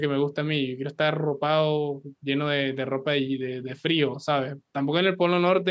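Nothing in the speech stands out as a fault; it simply carries the usual sound of a call microphone path, with the lowest bass trimmed away and nothing above 8 kHz, which is just how that processing behaves.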